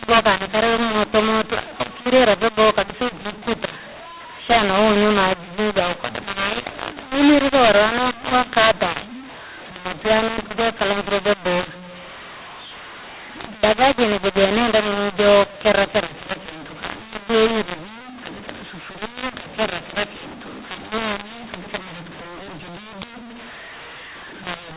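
From the first second to the end, the speech carries a mu-law and A-law mix-up: samples written with the mu-law curve are being expanded with the A-law table. That scrambles the levels, so some syllables jump too loud, others shrink, and near-silent samples are pushed up, so every pause fills with hiss. Ordinary clipping would leave the gaps quiet, which makes this fault easy to tell apart. Beneath it, the 8 kHz-sampled G.711 signal still stops at 4 kHz.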